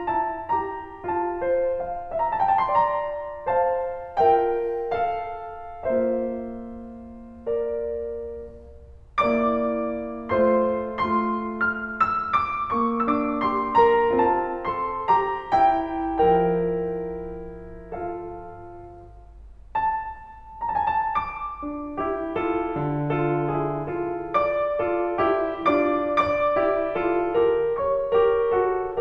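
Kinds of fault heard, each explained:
No technical faults can be heard anywhere in the music. Nothing in it calls for a fault description.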